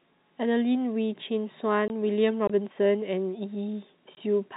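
At 1.88 s and again at 4.15 s the speech drops out for 20 ms, packet loss filled with silence. Each hole is a whole number of packet lengths, which fits two lost 10 ms packets, and the receiver inserted silence instead of concealing the gap. What marks these as network losses is their identical, packet-sized length. The sound on either side keeps the narrow, below-4 kHz band of the G.711 telephone coding.

Between 2.48 s and 2.50 s comes a block of digital silence, about 21 ms long, which fits a 1024-sample buffer that the program failed to fill in time. The audio cuts to silence and back with no fade, leaving a brief hole. Its length sets it apart: about 21 ms matches a power-of-two buffer, not a multiple of the 10 ms packets.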